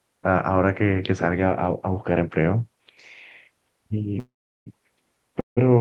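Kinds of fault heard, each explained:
Call audio freeze: sound halts at 4.19 s for 0.47 s and 5.40 s for 0.16 s, mostly silent, likely delayed packets; resumes with nothing lost.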